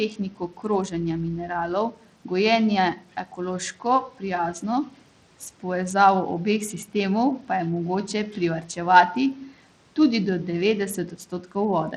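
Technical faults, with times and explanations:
Throughout: Bluetooth SBC compression. The most likely cause is a Bluetooth link running SBC with a small bit allocation, at a rate that fits roughly 80 kbps. The upper sub-bands get few or no bits and the rest are coarsely quantised. The treble thins and flickers in and out, and a gritty, aliased roughness clings to the speech. The room noise sits about 25 dB below the speech.
0.09–0.65 s, 1.91–2.07 s, 2.96–3.09 s, 11.11–11.56 s: speech cut by the noise suppressor. The suppressor misjudged parts of the speech as background and pulled them down along with the noise, by up to about 12 dB. The first cut ends just before "mineralov gojenje" and the third follows right after "mineralov gojenje". Each dip is brief, from a fraction of a second down to around a tenth, and leaves soft consonants and word endings sounding swallowed and faint.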